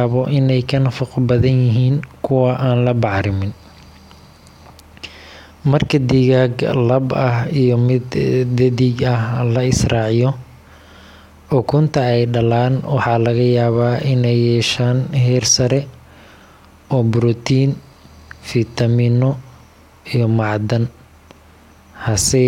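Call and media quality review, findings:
Nothing to flag on this speech recording; listened through and found no issues worth raising a ticket for.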